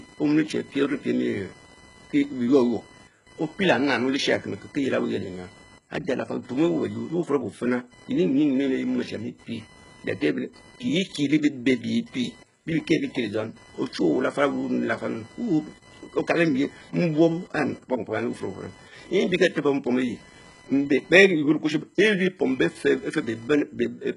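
Throughout the speech, a computer activity noise runs underneath: a buzzing, chirping whine pulsing at roughly 1 kHz, sitting around 30 dB below the speech. It comes from processor or peripheral load disturbing the shared audio ground, so it tracks machine activity rather than following the speech, unlike hum or hiss.

Also throughout, the treble is heavily damaged: s sounds turn gritty, lispy and metallic, and nothing survives above 11.1 kHz. This is likely HE-AAC compression at a very low bitrate, around 12 kbps. Replicated upper bands with misaligned harmonics tell it apart from a plain low-pass cut.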